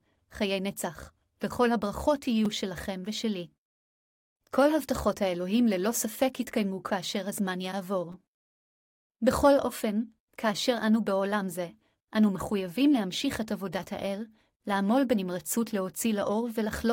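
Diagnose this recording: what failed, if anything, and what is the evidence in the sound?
The driver or buffer stage failed with a repeated buffer. Playback is briefly stuck at 2.45 s and again at 8.12 s. Each event is a short buzzy click in the speech, not a clear stutter. The repeating piece is about 5.3 ms long, which fits a 256-sample buffer. The device ran out of new audio and replayed the last block, twice in the first event and three times in the second. Hard joins between copies make the buzz. No audio seems to be lost.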